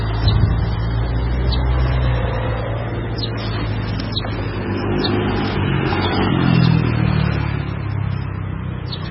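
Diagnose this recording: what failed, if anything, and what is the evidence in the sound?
The codec stage failed, most likely through MP3 compression at a very low bitrate. Across the whole clip nothing sounds above about 5.6 kHz, and the heavy codec damage is present from start to finish. The encoder ran short of bits, so it cut the treble at a fixed frequency and zeroed weak spectral lines frame by frame. Unlike an analogue low-pass or a sample-rate drop, the damage here reaches into the remaining band rather than only removing the top, which fits a rate around 16 kbps.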